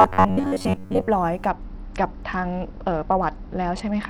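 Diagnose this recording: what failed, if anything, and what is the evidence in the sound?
From 0.01 s to 1.09 s the speech turns into a rigid, metallic buzz pitched at about 94 Hz, which only loosely follows the syllables. This is robotic sound from repeated short buffers, and the failure is likely at the driver or buffer stage. A buzz at that pitch means a block of roughly 10.7 ms is being replayed when fresh audio fails to arrive in time. Much of the real signal in that span, around 70 percent, is skipped rather than heard.

From 1.49 s to the end, at 4.10 s, the treble goes dull and a gritty quantisation noise sits on the speech without recovering. This is a Bluetooth SBC bit pool drop, at the codec stage of the wireless link. The sound fits a bit pool cut from 31 to about 9, near 72 kbps. At that rate the upper sub-bands get almost no bits and the remaining bands are coarsely quantised.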